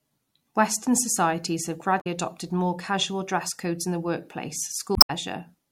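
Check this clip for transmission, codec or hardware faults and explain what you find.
Two faults, both damaged data in a compressed stream: a glitch from 1.97 to 2.07 s, between "societies have" and "adopted more casual dress", and another from 4.93 to 5.10 s. Corrupt frames make the decoder lose sync and hunt for the next header, so the audio breaks up there.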